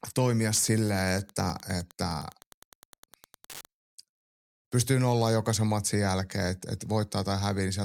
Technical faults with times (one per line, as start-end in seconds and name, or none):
0.53-3.66 Wi-Fi interference